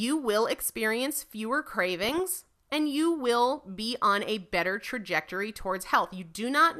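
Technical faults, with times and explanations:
2.03–2.19 s, DAB burbling: just after "will experience fewer", bit errors slip past error correction into the MP2 data, so wrong samples in individual sub-bands give short blips of noise over the speech. Unlike a dropout or click, the sound continues but warps spectrally, fitting about eight corrupted frames.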